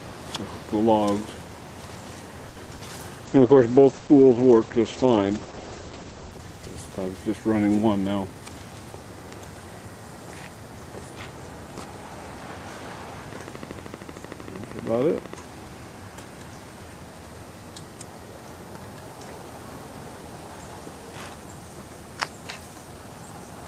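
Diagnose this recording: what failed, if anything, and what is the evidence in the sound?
At the network and jitter-buffer stage, a short stall from a late packet appears at 2.49 to 2.58 s. The sound holds for about 70 ms and then resumes where it stopped. Nothing is skipped; the delay simply grows by 70 ms. That is what separates it from a loss.

Short concealed packet loss, also a network fault, follows at 2.66 to 2.69 s and 2.75 to 2.81 s. Unlike the stall, audio really is missing here, about 20 ms and then 40 ms. The decoder bridged each gap by extrapolating the preceding sound, which leaves brief smears before it blends back.

A call bitrate drop in the codec runs from 3.27 to 7.63 s. Opus fell from 48 to 11 kbps and stayed at its lowest for about 2.8 s. Bandwidth narrowed from 20 kHz to 8 kHz, so the sound turns muffled and coarse. The change is sustained, not a momentary glitch.

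A jitter buffer speed-up follows at 7.99 to 8.36 s, once the buffer had built up excess delay. Repeated pitch-period cuts totalling roughly 50 ms played the audio at 112% speed with the pitch unchanged. It sounds hurried rather than gapped or held.

A train of clicks runs from 13.33 to 15.35 s. Roughly 30 similar pulses arrive at a regular 12.9 per second, around 10 dB above the sound, and they continue through pauses. Their steady pace, independent of the audio, points to an analogue or interface source, likely electrical interference.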